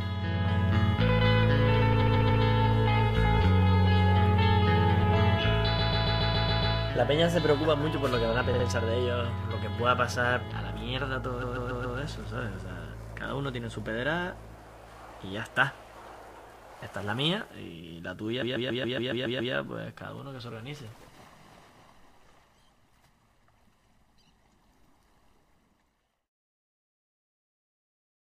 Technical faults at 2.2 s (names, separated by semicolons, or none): repeated frames